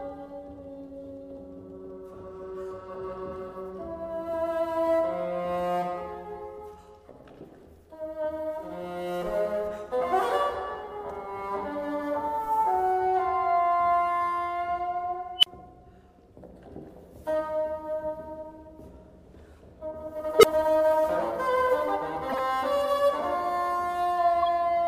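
A recursive stage in the processing chain turned into an unstable filter twice, its feedback pushing the output up without bound until the arithmetic overflowed and the filter reset. At 15.38 to 15.46 s a high squeal near 3 kHz swells over about 46 ms, clips, then drops into a silence of about 35 ms. At 20.39 to 20.44 s the same runaway produces a lower tone near 400 Hz, building over about 44 ms before a brief gap of about 12 ms. Separately, the decoder accepted a corrupt frame, or rather a short run of damaged ones, and played them as if valid. The misread gains and codes put energy where it does not belong, so at 22.29 to 22.39 s the audio breaks into a burst of chirpy noise spanning roughly four frames, peaking at about -15 dBFS.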